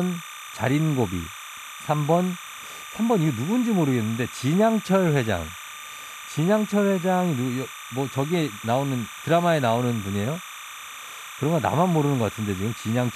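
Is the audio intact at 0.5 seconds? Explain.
No, there's timecode bleed at 0.5 seconds, and it runs under the whole clip. Linear timecode at 29.97 frames per second is leaking in from a neighbouring line, flipping between pitches around 1 and 2 kHz, so you get a steady chirpy warble roughly 15 dB below the speech.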